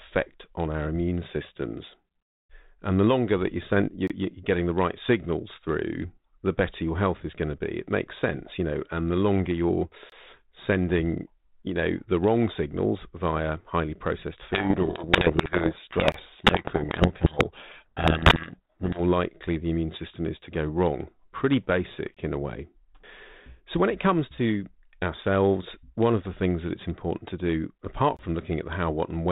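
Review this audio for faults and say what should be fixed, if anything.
Five short holes cut into the speech at regular points: 4.07–4.10 s (between "that you send you're" and "getting the right signals"), 10.10–10.12 s, 16.12–16.14 s, 22.14–22.17 s (between "to go wrong pretty" and "in a way"), and 28.17–28.19 s. Each lasts about 23 ms and they recur every 6 s. This is a gap between chunks: the audio was handled in 6-second chunks, and silence was inserted at each join. No sound is lost, but the flow breaks. To prevent it, join the chunks back to back with padding removed and schedule each one to start exactly where the previous one ends.

From 14.53 s to 19.00 s, starting after "signals via highly processed" and ending before "likely the immune system", the speech is buried in harsh, grinding distortion. This is a codec payload misread. The G.726 code words were packed in one bit order and unpacked in the other, so the sample differences were decoded wrongly while the stream still looked valid. 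Outside this stretch the sound is band-limited G.726 in the 32 kbit/s mode. To prevent it, make sender and receiver agree on the G.726 bit packing and check it at setup.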